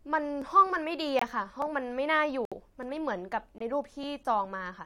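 From 0.42 s to 4.03 s, a click repeats every 1.21 s, about four times. These are clock drift buffer slips. They likely come from two clocks disagreeing by roughly 500 ppm, so a few dozen samples are dropped or repeated at each slip.

Corrupt frame muted faults cut abrupt silent holes at 1.19 s, 2.45 to 2.53 s, and 3.58 s. The decoder rejected damaged frames, and the player filled them with silence.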